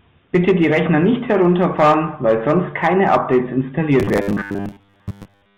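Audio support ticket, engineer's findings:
Robotic sound from repeated short buffers, 4.00 s to 5.57 s. Speech becomes a rigid metallic buzz at 100 Hz. Fits a 10 ms buffer being replayed. Likely cause: audio data arriving too slowly. Most of the real audio skipped.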